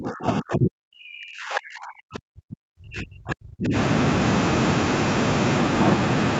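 Speech suppressed in double talk runs from the very start to 3.75 s. The speech dips by as much as about 40 dB and drops away in pieces, so it comes through thin and broken before recovering after 3.75 s. The likely cause is both ends of the call talking at once: the echo canceller could not tell this talker from the loudspeaker echo and turned everything down. The band stopping near 8 kHz is ordinary call microphone processing.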